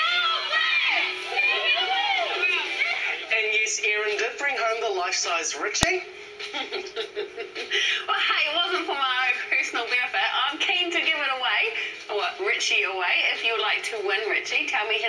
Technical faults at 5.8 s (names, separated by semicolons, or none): file header played as audio